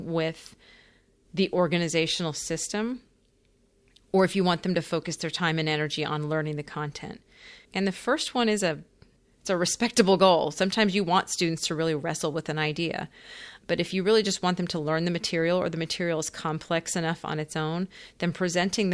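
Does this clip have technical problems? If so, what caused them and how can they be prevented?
No, nothing in this speech recording points to a technical fault, so there is no cause to trace and nothing to prevent.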